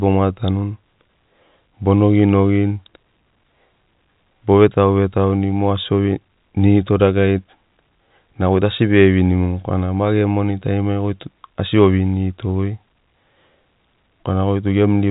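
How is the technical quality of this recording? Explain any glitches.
No glitches or faults can be heard anywhere in the recording. The speech carries the narrow sound of G.711 telephone coding, with nothing above 3.8 kHz.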